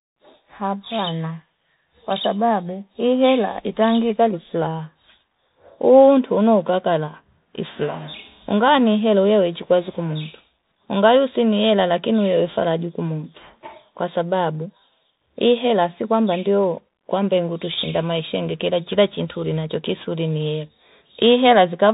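The speech has passed through a Bluetooth CVSD headset codec for its whole length, a narrowband link that encodes each sample as a single up-or-down step of adaptive size, which fits the 64 kbps headset path. Nothing above 4 kHz survives, sibilants turn scratchy, loud bright passages distort as the steps fall behind, and a granular hiss sits underneath.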